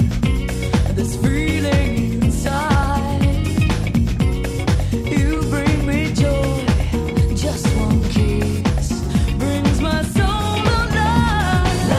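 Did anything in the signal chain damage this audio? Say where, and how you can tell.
Yes. The damage sits at the network receive stage, where the sender's and receiver's clocks disagree. This is clock drift between sender and receiver: the sending side runs fast, by roughly 4 percent. Because samples arrive faster than the receiver plays them out, its jitter buffer keeps filling and has to shed material to avoid overflowing. The result is small, unevenly spaced timing hiccups through the audio rather than one clean glitch.

Those hiccups are the repeated timing corrections, running from 0.21 s to 11.23 s. Across that stretch the receiver keeps trimming short pieces to stay in step, all in the same direction, so the material plays at an effective 103 percent speed. Each cut is tiny, and they fall at irregular intervals. That pattern marks buffer-level correction of drift, not a codec or wiring fault.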